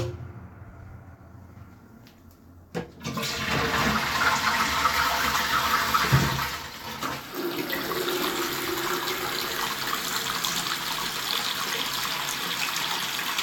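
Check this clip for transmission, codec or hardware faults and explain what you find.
One fault is present, a short stretch of channel delay (comb filtering) from 3.93 to 4.93 s. For that second the sound turns slightly dull and thin at the very top, the highest frequencies softened rather than hollowed out. One channel lags the other by roughly a single sample, a few hundredths of a millisecond, and when the two are summed to mono their shared content cancels. At so small an offset the first notch lands near 20 kHz, so only the extreme treble is affected.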